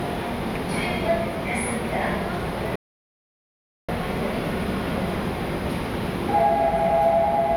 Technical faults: audio dropout to silence

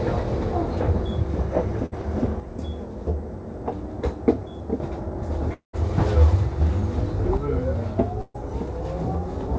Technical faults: burst of packet loss; one channel drops out; long network dropout

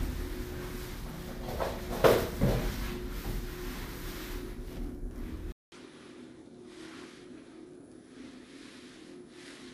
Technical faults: input switched to a poorer device

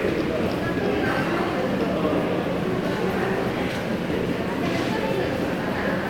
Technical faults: none

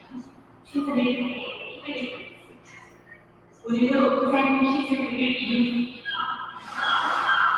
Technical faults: noise suppressor applied to music or sounds; sound cut by the noise suppressor

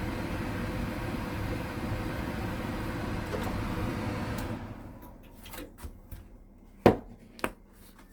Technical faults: Opus compression

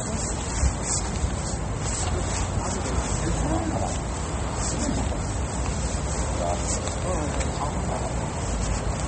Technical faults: MP3 compression

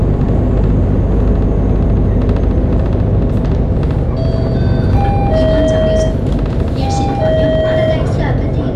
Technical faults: hard clipping

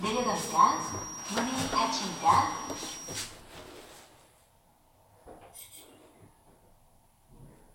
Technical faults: feedback whistle

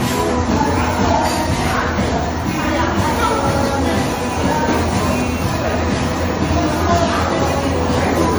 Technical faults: generation loss

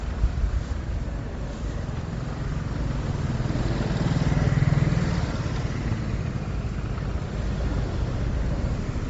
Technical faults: Bluetooth LC3 compression

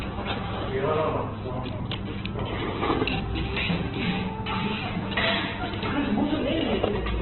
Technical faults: Opus compression

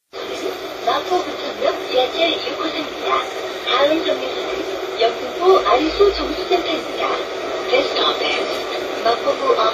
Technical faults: transcoding between lossy codecs

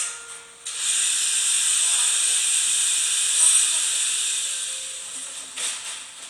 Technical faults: none

